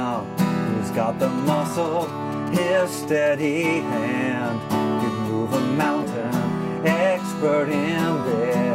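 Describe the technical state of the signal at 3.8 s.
At 3.8 s the signal carries GSM phone buzz, running from 3.40 to 4.26 s. A nearby 2G handset on a call transmits bursts at about 217 Hz, and the audio circuitry rectifies those radio pulses into a hard, raspy buzz about 23 dB below the signal, holding steady throughout the span. A spectrogram shows a dense comb of horizontal lines at 217 Hz and its multiples, and the waveform shows a regular pulse train riding on the audio.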